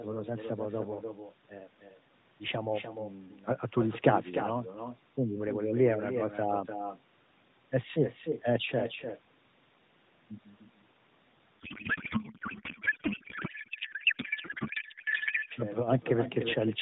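From the very start and running the whole way through, there's an echo with no canceller. The far end is evidently playing the call out of a loudspeaker, its mic is catching that, and nothing is cancelling it, so your own speech comes back after the network round trip. Every phrase gets shadowed roughly a third of a second later by a copy sitting about 8 dB down, thinner than the original.

Then from 11.6 s to 15.5 s there's a codec payload misread. The AMR frames look valid, but the decoder is unpacking them in bandwidth-efficient layout when they were sent octet-aligned, so every field lands in the wrong place. The speech is replaced by garbled noise and warble that barely tracks it. It snaps back at 15.5 s, when the decoding lines up again. Through all of this the band stops at 4 kHz, as you'd expect from narrowband AMR.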